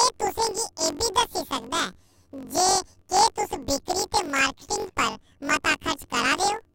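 Right from the start and through the whole speech clip, you get planar audio read as interleaved. Each 21.77 ms block of left-then-right samples plays as two double-speed halves, an octave up, so the speech gets a robotic buzz at about 45.9 Hz.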